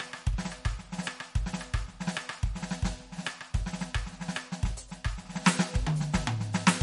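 Throughout the music, the encoder has likely run short of bits in MP3 compression, at a rate that fits roughly 48 kbps. To cope, it has cut the treble outright, so nothing remains above 11.2 kHz, and it has zeroed weak frequency lines that then flicker on and off from frame to frame. The damage is plainly audible: the top end sounds dull and capped, the texture turns watery and swirly, and attacks come out smeared rather than crisp.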